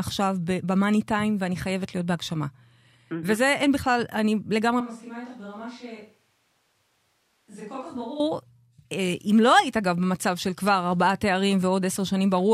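From 4.81 s to 8.20 s the speech suddenly turns hollow, roomy and about 10 dB quieter, likely a switch to a distant microphone.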